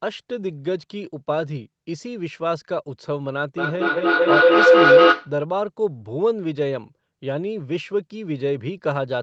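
Feedback howl from 3.57 to 5.4 s: a microphone-to-loudspeaker loop gains level each trip, building a tone around 500 Hz that pulses every fifth of a second and peaks about 12 dB above the speech.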